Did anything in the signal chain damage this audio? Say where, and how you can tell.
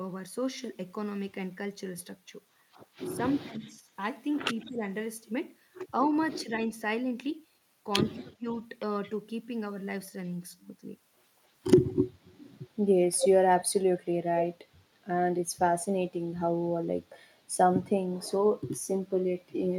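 Yes. Speech suppressed in double talk, in call processing: the speech dips by about 10 dB at 2.99–3.88, 4.63–4.83 and 6.43–6.49 s, and by about 30 dB at 8.19–8.48 s. This is likely an echo canceller ducking both talkers at once.

Echo leak, also in call processing: a delayed copy of the speech returns 220 ms later at 3.34–3.69 s (about 25 dB down) and at 8.51–9.10 s (about 30 dB down). At 13.18–13.65 s it is roughly as loud as the speech. This is likely residual loudspeaker echo slipping past the canceller. The fixed-delay repeat sets it apart from room reverberation.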